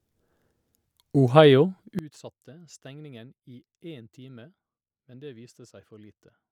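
From 1.99 s to the end, the speech collapses by about 21 dB to a faint copy, the likely result of one channel inverted cancelling the shared centre in mono. Unlike a plain level drop, nearly everything common to both channels vanishes while faint residue remains.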